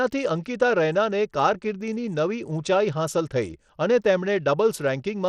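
From start to finish the speech carries damage typical of Bluetooth SBC compression, likely from a link running at a low bit pool; the coarseness fits a rate near 80 kbps. SBC splits the signal into a few wide sub-bands and hands out bits with no model of hearing, so the faint upper bands are starved. The treble thins and flickers in and out, and a gritty noise with aliasing sits on the speech.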